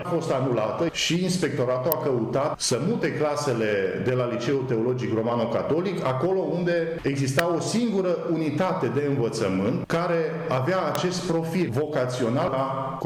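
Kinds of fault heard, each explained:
Electrical switching spike: Three sharp, very brief snaps sit on top of the sound at about 1.92, 7.39 and 10.95 seconds. Each is over almost instantly and peaks at roughly -10 dBFS. That hard, isolated crack is the mark of an electrical arc getting into the audio line, most likely from a switch, motor or static discharge somewhere nearby, rather than anything in the sound itself.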